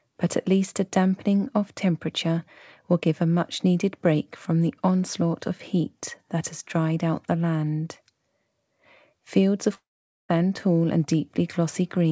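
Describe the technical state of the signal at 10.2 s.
At 10.2 s the audio sits in a dead stretch: from 9.75 s the last sound is stretched into a fading buzz or hiss, then most of the span, about 450 ms, is silence until the audio returns at 10.31 s with the missing part skipped. This is likely a long network dropout, where packets stopped arriving for about half a second and the receiver could only extend and fade what it last had, over a G.722 call path with nothing above 8 kHz.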